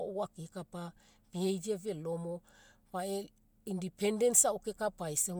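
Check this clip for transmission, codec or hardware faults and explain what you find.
No transmission, codec or hardware faults turned up when checking this clip.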